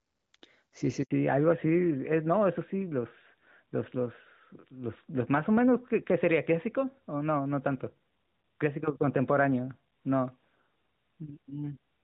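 At 1.03 s the speech breaks off in a handover gap lasting 80 ms, until 1.11 s. The call is being passed from one network link to another, and no speech frames are delivered while the switch completes. The voice fades out within a few tens of milliseconds rather than clicking off, then there is plain silence until the new link starts carrying audio. Whatever was said in that interval is simply missing.

From 1.11 s to the end, the call shows fallback to narrowband. Before the handover the speech has the fuller HD Voice band, with light coding damage consistent with AMR-WB at around 12.65 kbit/s. After it, nothing above 4 kHz remains. This is what a drop to the older AMR-NB codec at about 12.2 kbit/s sounds like. Sibilants and breathiness lose their top end, and the voice becomes duller, boxier and rougher for the rest of the clip.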